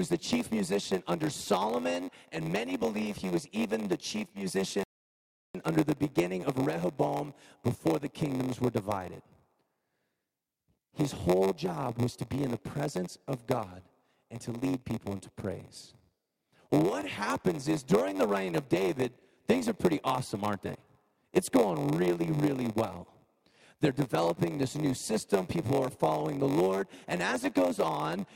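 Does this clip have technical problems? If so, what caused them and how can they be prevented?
Yes. A block size mismatch (padded) runs through the whole clip. One stage writes shorter blocks than the next stage reads, and zeros fill the rest of each block. That puts a tiny gap in every block, which is heard as a steady buzz at 93.8 Hz. That buzz rate fits a 512-sample read block. The audio also plays at 0.938 times normal speed, about 6% slow, while the pitch stays close to normal. To prevent it, make every stage in the chain use the same block size.

There is also a rebuffering stall from 4.84 s to 5.55 s. The player ran out of downloaded audio and stopped. The sound drops to silence, then picks up exactly where it left off. Nothing is lost, but about 0.67 s of extra time is added to the clip. To prevent it, buffer more audio before playback starts or keep the download rate comfortably above the playback rate.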